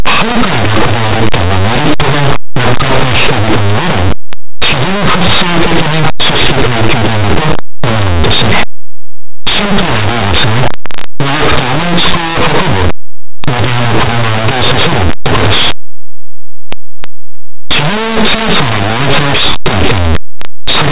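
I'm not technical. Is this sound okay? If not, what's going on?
No. Throughout the 21 seconds, plain 8-bit speech is played back as if it were mu-law, a linear audio read as companded mix-up, so quiet moments blast out as harsh, near full-volume distortion.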